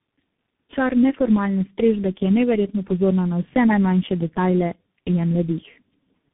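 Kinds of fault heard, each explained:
Tandem speech coding: the speech was decoded and re-encoded by three speech coders in turn, each working on the previous coder's degraded output. That compounding leaves it rough, muffled and warbly. A spectrogram shows nothing above 3.8 kHz and smeared, unstable formant bands.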